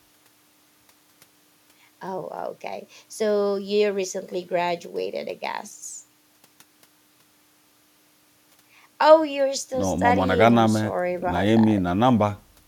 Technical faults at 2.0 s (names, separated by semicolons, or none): none